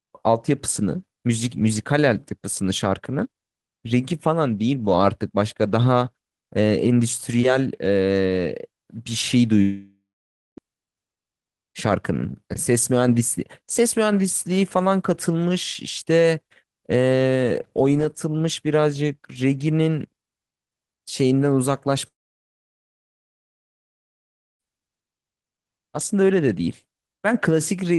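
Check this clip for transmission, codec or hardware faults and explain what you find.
Two gaps interrupt the speech, both consistent with a long network dropout, at 9.61 to 10.60 s and at 22.08 to 24.62 s. The likely cause is a stream that stopped arriving, about 0.96 s and then 2.52 s of it, which the receiver never recovered. The first gap trails off as a brief fading buzz into about 0.55 s of silence. The second falls nearly silent for about 2.48 s. Each time, the sound resumes further along, with the lost stretch simply absent.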